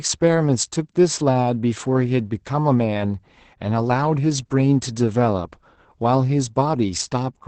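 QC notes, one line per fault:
Throughout: Opus voice compression. The speech is band-limited with nothing above 8.7 kHz, consistent with SILK wideband coding, and sounds heavily muffled, hoarse and slightly robotic because the excitation is coarsely quantised, which points to a bitrate around 10 kbps.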